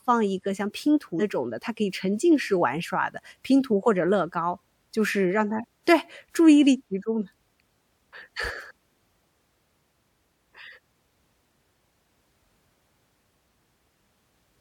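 Speech with compressed frames skipped at 1.19 s and 5.6 s: about two frames (roughly 100 ms) then one (roughly 50 ms) are lost, jumping ahead by 46.4 ms frame units. On a spectrogram, harmonics break abruptly at each join.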